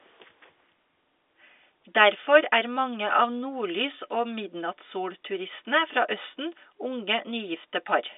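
No technical faults turn up anywhere in the speech, which carries the narrow band of G.711 telephone coding, roughly 300 Hz to 3.6 kHz with nothing above 3.8 kHz.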